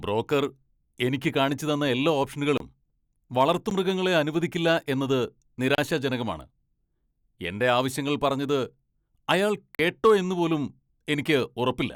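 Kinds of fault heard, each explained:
Block of digital silence: at 2.58, 3.70, 5.75 and 9.75 s, 11 to 43 ms of speech drops to silence without fade, fitting late-filled output buffers.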